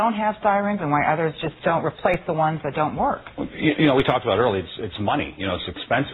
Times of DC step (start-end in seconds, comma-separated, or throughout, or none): 2.14, 4.00